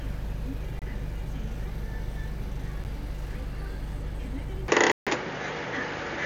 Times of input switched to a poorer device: 4.68-6.26

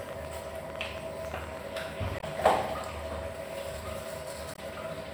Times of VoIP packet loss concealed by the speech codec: none

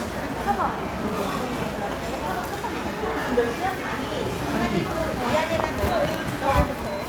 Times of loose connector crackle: none

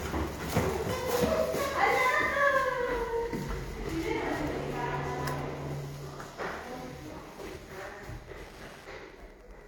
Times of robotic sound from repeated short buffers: none

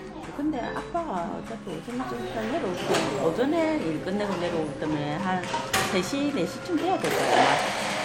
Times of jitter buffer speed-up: none

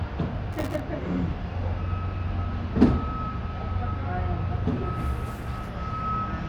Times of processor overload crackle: 0.53-0.80

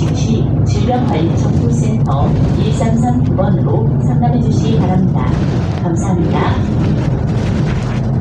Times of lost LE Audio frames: 2.22-2.25

